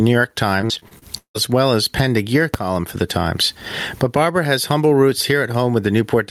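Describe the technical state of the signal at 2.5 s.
At 2.54 s, a calculation produced invalid numbers that were driven to full scale for one short block, which fits a 256-sample buffer, giving a single sharp bang. Underneath, gain pumping continues, likely from gain set far too high with a fast limiter pulling it back by around 25 dB, so loud and soft parts sit closer in level and the sound is squashed.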